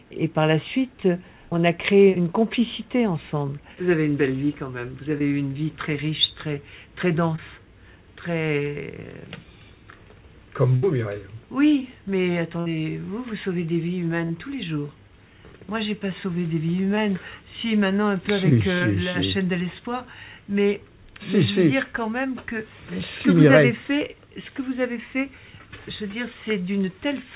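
Short concealed packet loss appears at 5.18–5.22 s, 7.36–7.40 s, 14.26–14.32 s, 16.96–16.99 s and 18.79–18.83 s. Each is a 20 to 40 ms hole the receiver bridged by extending the preceding sound, heard as a brief smear or wobble.

A burst of packet loss occurs at 10.76–10.84 s and 12.60–12.68 s. Here about 60 ms went missing, and the extended sound decays into a buzz or hiss before the audio jumps ahead.

Throughout, the sound is cut off at 4 kHz, which fits G.711 at 64 kbps.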